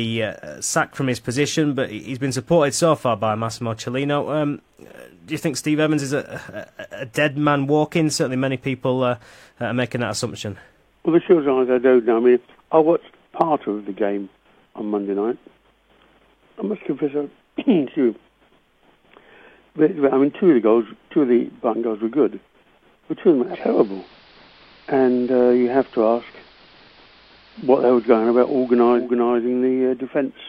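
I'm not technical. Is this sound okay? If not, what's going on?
No. From about 23.43 to 29.10 seconds there is a digital radio blending to analogue. The radio lost its digital signal and faded across to the older AM broadcast of the same station, taking about 0.19 seconds to switch over, then returned to digital. During that stretch the sound turns dull, since AM carries much less treble. A faint hiss comes up underneath, and the volume shifts slightly.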